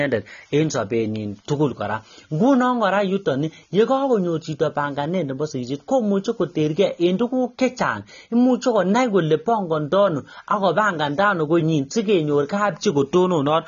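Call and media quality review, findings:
Speech dull and smeared throughout, band-limited at 6.9 kHz, fizzy texture on sibilants; likely AAC compression at low bitrate, coarse quantisation lowering cut-off and thinning spectrum.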